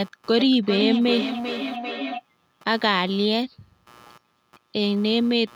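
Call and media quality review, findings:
Computer activity noise throughout: buzzing at roughly 100 Hz, well below the speech. Processor or mouse load shifting the shared audio ground.

Feedback howl 0.39–2.24 s: tone near 300 Hz, pulsing about every 400 ms, peaking about 5 dB under speech. Second device in room closing a mic-speaker loop.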